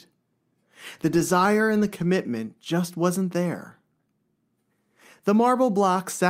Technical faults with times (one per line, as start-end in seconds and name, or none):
none